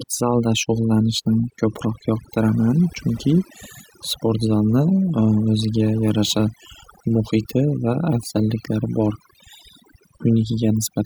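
Overdone noise removal runs through the whole speech clip. A noise reduction stage was set far too aggressively. Frequency bands near its noise estimate are pulled down or muted. The background drops and breaks up into twinkling specks.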